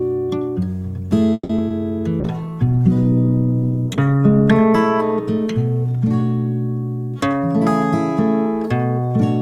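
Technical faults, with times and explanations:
1.33 to 1.51 s, call audio freeze: the music stalls while its last sound carries on as a fading buzz for about 160 ms, then drops to about 30 ms of silence before resuming exactly where it left off, so nothing is lost. The likely cause is packets held up in transit until the jitter buffer ran dry, with the receiver extending the last sound to cover the wait. Playback ends up about 160 ms later than before.
1.57 to 1.60 s, skip ahead: roughly 70 ms of the music is cut out and the two sides are joined almost directly, with only about 10 ms of filler across the seam. This fits a stretch of audio being discarded while later material was already queued, either lost in transit or dropped by an overfull jitter buffer. The jump takes back some of the delay the freeze had just added, roughly 50 ms.
1.68 to 1.72 s, short concealed packet loss: about 20 ms of audio never reached the decoder in time. 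The receiver covered the hole by continuing the preceding sound and blending back into the real signal, which leaves a brief smear or wobble in the music rather than a clean gap. Anything that happened inside that 20 ms window is replaced by the extrapolation rather than played.
1.79 to 2.01 s, jitter buffer slow-down: the music runs at about 87% speed without any change in pitch, stretched by roughly 37 ms in total. With its reserve low, the receiver rebuilt it by repeating single pitch periods many times in a row. That repetition is what draws the sound out and can lend it a faint warble over this short stretch.
2.22 to 8.69 s, call bitrate drop: the music turns coarse and watery and loses its top end, which fits the encoder being pushed from about 128 kbps down to about 16 kbps after the call's bandwidth estimate collapsed. Working with so few bits, the encoder quantises more roughly and trims high frequencies. 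The worst quality lasts about 1.68 s, and the sound improves as the bitrate climbs back before 8.69 s.
7.13 to 7.41 s and 8.20 to 9.13 s, jitter buffer speed-up: the music plays faster at unchanged pitch, at about 110% in the first stretch and a gentler 103% in the second, with roughly 40 ms trimmed from each. Too much audio had built up in the buffer, so the receiver repeatedly cut out short pieces a pitch period or so long to reduce the delay. The result is that the tempo surges and no longer holds steady.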